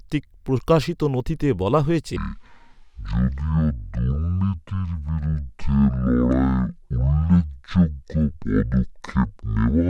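A speech clip in which, from 2.16 s to the end at 9.89 s, a section at the wrong speed plays at half the recorded rate, so the voice drops by roughly ten semitones and drags, deep and slow. This is likely a playback or editing clock mismatch. On a spectrogram the harmonics and formants sit much lower and stretch out in time after 2.16 s. On a waveform the syllable envelopes become visibly longer and more widely spaced from that point.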